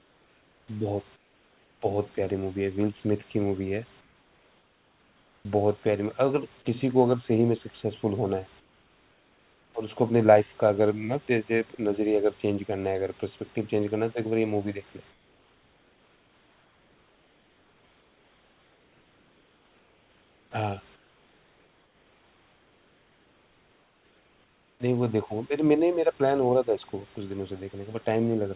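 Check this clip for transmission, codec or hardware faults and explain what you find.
Comfort noise in place of the background appears in six pauses: 0.00–0.68 s, 1.16–1.82 s, 4.01–5.45 s, 8.60–9.74 s, 15.11–20.51 s and 20.96–24.80 s. The likely cause is discontinuous transmission. The sender stops sending audio when its voice detector hears no speech in pauses, and the receiver fills them with synthetic noise. The real room background, about 34 dB under the speech, gives way to a flat, featureless hiss about 7 dB quieter, about 8 dB in the second pause. The room returns when speech resumes. Nothing above 4 kHz comes through, which fits a narrowband G.711 call path.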